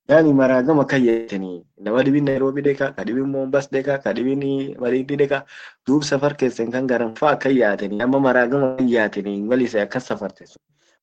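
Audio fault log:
1.09–1.31 s, long network dropout: likely no audio arrived for about 180 ms; the receiver stretched the last sound into a fading buzz or hiss, then speech resumed with that stretch missing.
2.30–2.38 s, 7.09–7.18 s, 7.93–8.02 s, 8.65–8.81 s, burst of packet loss: about 60 ms of packets went missing (120 ms at 8.65 s), heard as brief held buzzes or hisses before speech jumps ahead.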